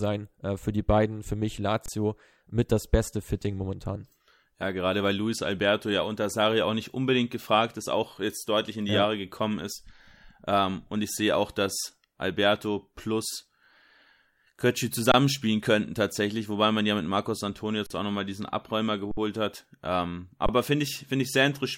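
At 1.86, 15.12, 17.86, 19.11 and 20.46 s, the speech freezes flat in an underrun with held sample. The output buffer ran dry. Gaps last 23 to 60 ms, and the 23 ms ones fit a 1024-sample buffer. Speech resumes softly, with nothing lost.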